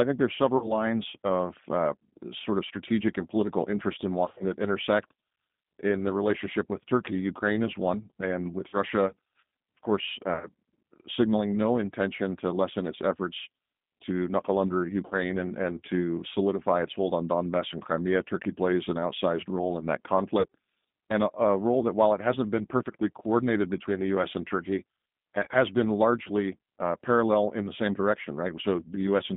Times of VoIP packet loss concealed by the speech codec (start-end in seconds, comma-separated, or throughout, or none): 0.57-0.74, 4.26-4.44, 8.68-8.78, 10.34-10.50, 15.06-15.15, 20.40-20.47, 25.44-25.54